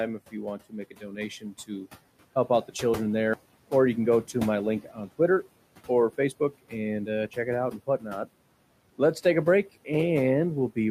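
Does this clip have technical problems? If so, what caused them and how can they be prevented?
Yes. Noise suppressor artifacts run throughout this speech: the background, sitting about 19 dB under the voice, is pulled down by about 18 dB between phrases. On a spectrogram this shows as a patchy, flickering noise floor. Setting the suppressor gentler, with less reduction and smoother release, prevents it.

Speech cut by the noise suppressor occurs at 0.91–1.17 s, at 1.41–1.87 s after "want to make a" and before "help out the children", at 4.83–5.09 s after "go to my link", and at 7.71–8.06 s after "uh check it out". The suppressor mistook soft speech for noise and dropped it by about 12 to 16 dB, affecting roughly a tenth of a second or more each time. This shows as dips in the waveform envelope and faded consonant energy on a spectrogram. Lowering the suppression threshold or improving the speech-to-noise ratio at the microphone prevents it.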